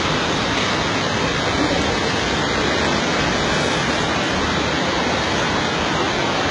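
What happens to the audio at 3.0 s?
At 3.0 s, as throughout the clip, the treble sounds gritty and metallic with nothing above 11 kHz, likely HE-AAC compression rebuilding highs from lower bands at a very low bitrate.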